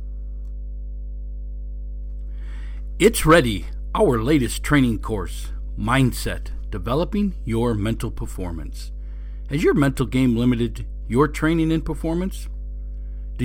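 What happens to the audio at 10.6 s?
At 10.6 s the speech sits on top of a steady, low droning tone at 50 Hz, with some low harmonics above it. It is fairly loud, only modestly below the speech, and it runs unchanged through the whole clip rather than starting or stopping here. This is mains hum: a ground loop or a nearby transformer has coupled the 50 Hz power line into the signal path, so that tone is mixed in continuously.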